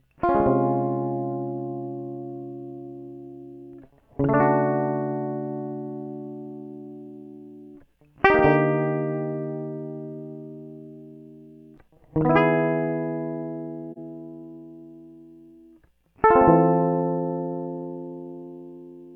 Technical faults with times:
13.92-13.98 AAC frame loss with muting

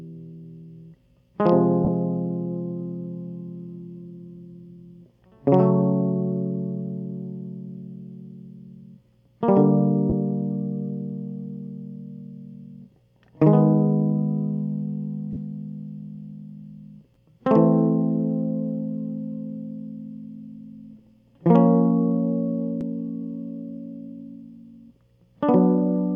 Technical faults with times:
1.85-1.88 lost LE Audio frames
10.10-10.12 lost LE Audio frames
15.33-15.36 lost LE Audio frames

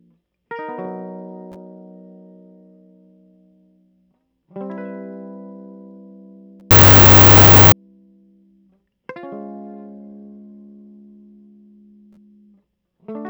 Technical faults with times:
6.71-7.72 wrong sample width

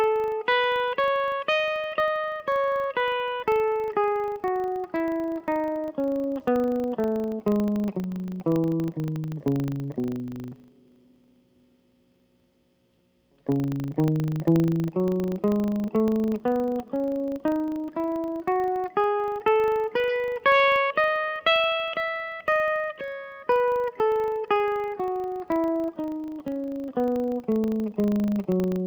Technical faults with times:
0.00-28.87 filter restarted on every block

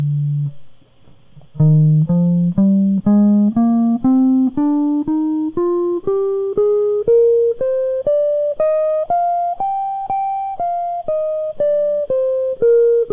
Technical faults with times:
none

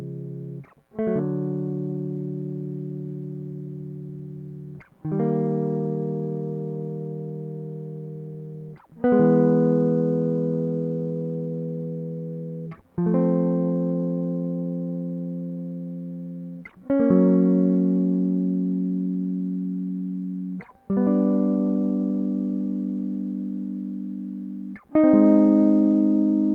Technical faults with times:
none

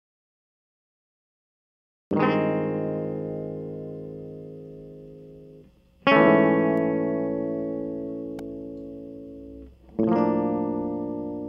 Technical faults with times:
6.77 bit error spike

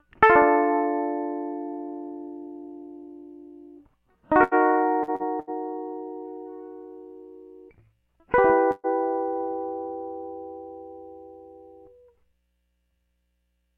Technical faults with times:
4.43-4.54 burst of packet loss
5.03-5.23 short concealed packet loss
5.40-5.50 burst of packet loss
8.71-8.87 burst of packet loss

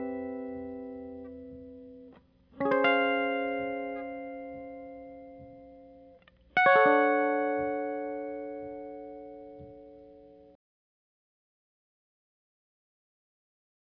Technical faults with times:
none

